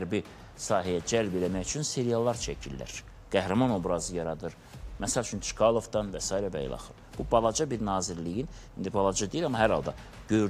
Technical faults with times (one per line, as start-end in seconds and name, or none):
none